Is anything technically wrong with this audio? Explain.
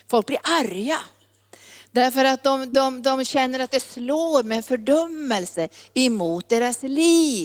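Yes. There are two faults, both typical of a voice call.

From 2.70 to 2.74 s there is a short concealed packet loss. About 20 ms of the speech never arrived in time. The receiver extended the preceding sound to fill the gap, as a continued pitch for voiced sound or as shaped noise for unvoiced sound, and then crossfaded back into the real signal. The result is a brief smear or wobble in the speech.

From 3.24 s to the end there is a call bitrate drop. The call's bandwidth estimate fell, and the encoder was told to spend far fewer bits. What is heard fits a fall from about 32 kbps to about 14 kbps, which stays at its lowest for roughly 2.8 s. The speech is coded more coarsely and sounds rougher or more watery. It does not recover before the clip ends.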